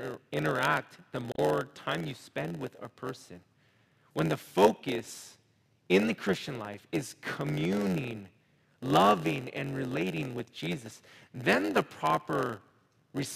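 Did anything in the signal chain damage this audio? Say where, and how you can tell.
Yes. A steady buzz at about 91.9 Hz sits under the speech for the whole clip, and everything runs slow, at 0.919 times normal speed, while the timbre stays about normal. That is a block size mismatch (padded) at the driver or buffer stage. One stage writes blocks slightly shorter than the next stage reads, and the shortfall is zero-filled. This puts a brief gap in every block, which creates the buzz at the block rate and stretches the timing.

At 1.32 to 1.39 s, between "interact the" and "time you spend with", there is a short glitch. This is damaged data in a compressed stream, at the codec or storage stage. Corrupted bytes made the decoder misread or reject the frames there. It lost sync and resumed at the next valid frame header, leaving a brief artefact.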